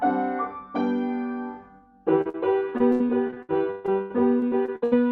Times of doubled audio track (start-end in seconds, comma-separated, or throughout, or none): none